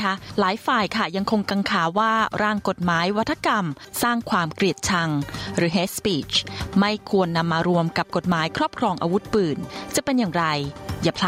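Throughout the clip there is gain pumping, most likely from input gain set far too high for the microphone and a fast limiter or compressor clamping down whenever a loud sound arrives. The gain swings by about 20 dB. Loud and quiet passages end up squeezed close together in level, and the whole sound feels flattened.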